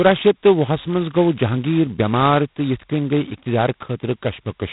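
A harsh, rasping hiss that rises and falls with the speech runs throughout, with nothing above 3.9 kHz: G.726 ADPCM distortion, consistent with the coarse 16 kbit/s mode.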